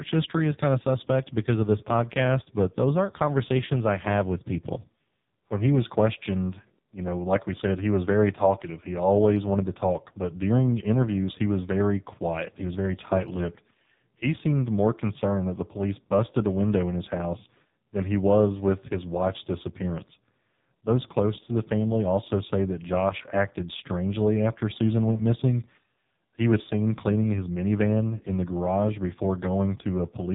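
From start to finish this speech has gone through the AMR narrowband mobile codec, the old 2G/3G phone codec. Everything is squeezed into an 8 kHz sampled band, so nothing above 4 kHz survives and sibilants go dull. The codec rebuilds the voice from a vocal-tract model fed by a few pulses every 5 ms, and the damage here is heavy: a buzzy, synthetic edge that fits one of its lowest modes, around 5.15 kbps.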